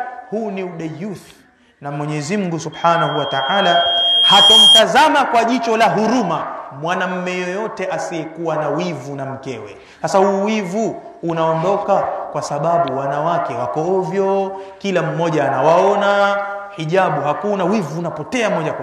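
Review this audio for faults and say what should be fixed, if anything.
Loudspeaker feedback squeal, 2.72 to 4.83 s: the microphone picks up its own loudspeaker, and at 3.2 kHz the loop gain exceeds one. A tone swells over roughly two seconds to about 10 dB above the sound. A spectrogram shows a single brightening horizontal line at 3.2 kHz, and the waveform's envelope balloons. To prevent it, lower the monitor gain, move the microphone away from the loudspeaker, or notch 3.2 kHz out of the feed.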